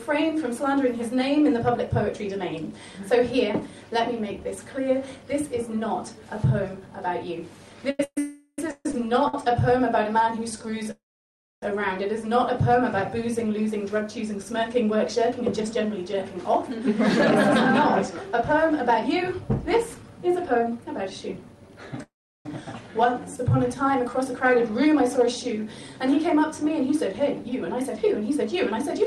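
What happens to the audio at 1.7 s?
Nothing goes wrong at 1.7 s; the audio plays through that moment intact, with no dropout, click or distortion.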